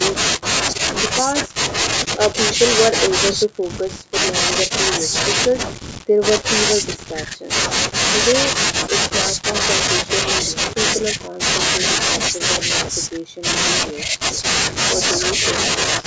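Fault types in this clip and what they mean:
Nothing stood out on listening to this speech, which shows the usual narrowed bandwidth of a call microphone path with nothing above 8 kHz.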